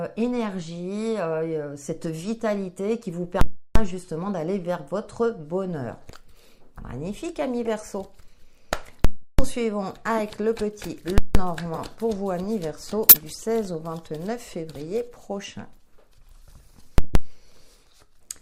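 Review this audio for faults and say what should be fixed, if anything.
There are five short bursts at 0.43–0.45, 7.66–7.68, 10.18–10.20, 11.74–11.80 and 13.09–13.16 s. That's a corrupt frame decoded. Damaged bits in one to a few compressed frames got played anyway, spraying energy at the wrong frequencies. The early ones are faint, but they get louder, and the last one is close to full level. Check the transport for bit errors and have the decoder conceal frames that fail their integrity checks instead of playing them.

Four spots show invalid numbers at full scale: 3.41–3.76 and 9.05–9.39 s (about 0.34 s each), and 11.18–11.35 and 16.98–17.15 s (about 0.17 s each). Each one is a loud pop at the start and end with dead air between, where the output got pinned at full scale. The lengths fit processing blocks of 16384 and 8192 samples. Catch non-finite values in the processing chain and reset or mute the block instead of passing them to the output.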